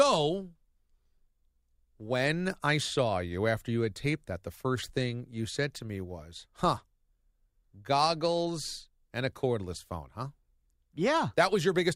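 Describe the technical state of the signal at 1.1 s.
The signal at 1.1 s is intact, with no fault present at that moment.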